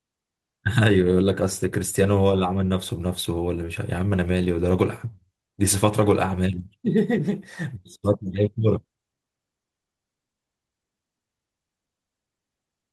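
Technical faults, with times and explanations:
No technical faults are audible in this speech recording. There is nothing here to time or explain.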